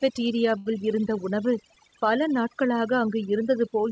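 From the very start the speech carries overdone noise removal. The suppressor was set far too hard, so any frequency band sitting near its noise estimate gets pushed down or switched off, and quieter parts of the voice go with it. The background drops and breaks up into little twinkling specks. It stays that way for the whole clip, on top of the call-codec band limit with nothing above 8 kHz.

At 0.58 to 0.68 s, just before "இருந்த உணவு பல நாட்களாக", there's a short stall from a late packet. A packet didn't turn up on time, the jitter buffer ran dry, and the receiver stretched the last bit of sound for about 76 ms until the packet landed, then carried on from the same spot. Nothing is lost, but that sound hangs on a beat too long, and everything after it runs 76 ms later.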